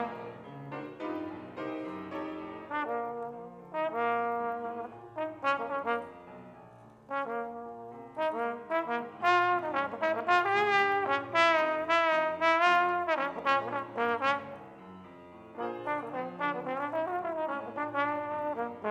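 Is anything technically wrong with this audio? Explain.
No, nothing here stands out as a technical problem, so this one's fine to listen to as it is.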